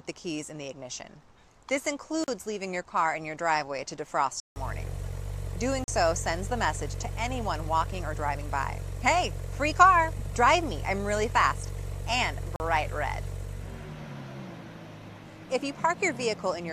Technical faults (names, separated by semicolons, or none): block of digital silence